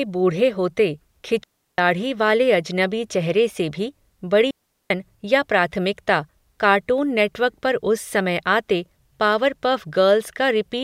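A digital wireless dropout occurs twice: the link loses too much data, so the receiver mutes with a very short fade. Clean holes of near silence, with no noise burst, run from 1.44 to 1.78 s, just before "वाले अजनबी", and from 4.51 to 4.90 s, between "से भी" and "या प्राथमिकता कार्टून नेटवर्क".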